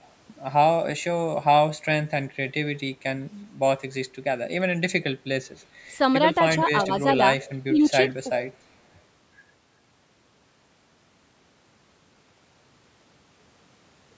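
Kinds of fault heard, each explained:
Echo leak: At 5.59 to 5.66 s and again at 7.41 to 7.53 s, a faint delayed copy of the speech trails about 385 ms behind, very low at first and clearly louder the second time. The likely cause is a far end playing the call over a loudspeaker, where an echo canceller left part of the microphone pickup in place and sent that residue back down the line.
Speech suppressed in double talk: At 6.87 to 6.92 s the speech dips slightly for about 50 ms, and at 7.67 to 7.82 s it drops much more deeply for about 150 ms, close to the second echo. This likely comes from an echo canceller facing both sides talking at once. Unable to tell the local talker from loudspeaker echo, it turned both down together, briefly pulling the speech level under.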